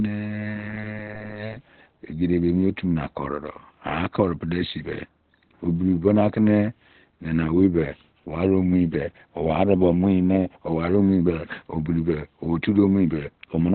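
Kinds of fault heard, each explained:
Opus compression: The speech sounds muffled and hoarse throughout, likely from Opus's narrowband speech mode; a spectrogram shows a flat ceiling, empty above 4.2 kHz.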